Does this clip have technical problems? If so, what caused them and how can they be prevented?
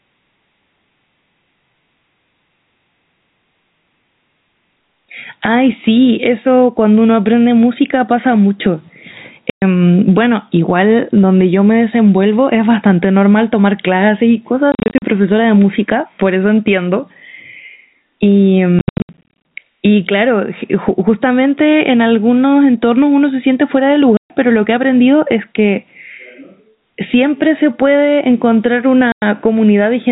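Yes. Throughout the recording the level pumps up and down, swinging by around 10 dB. Loud and quiet syllables sit unnaturally close together, so the speech sounds squashed and breathing. This is gain pumping, likely caused by input gain set far too high for the microphone, with a fast limiter or compressor clamping down on every loud sound. Setting the preamp gain correctly and using a gentler, slower compressor would prevent it.

Speech is also cut by hard-edged holes of dead silence. These come at 9.5 to 9.62 s (120 ms), 14.72 to 15.02 s (200 ms in short bursts up to 40 ms), 18.79 to 19.31 s (420 ms in bursts up to 80 ms), 24.17 to 24.3 s (130 ms) and 29.12 to 29.22 s (100 ms). This is packet loss filled with silence: packets were lost in transit and the receiver played nothing in their place. The gaps come in multiples that fit 10 ms packets. The telephone-band G.711 coding underneath passes nothing above 4 kHz, as expected for that format. 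A more reliable network path, a jitter buffer, and packet loss concealment at the receiver would prevent or mask these gaps.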